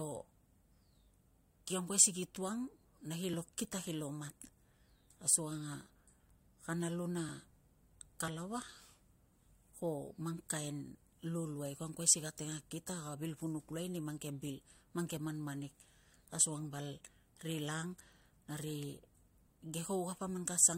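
Overlap between stream segments occurs at 3.34, 5.30 and 6.29 s. Neighbouring segments, consistent with one-second segments, have overlapping time stamps, so the player discards 14 ms of speech that was never duplicated. The waveform jumps at each point, heard as a tiny click or skip.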